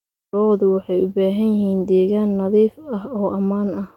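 No technical faults can be heard anywhere in the clip, so there is nothing to describe in time order.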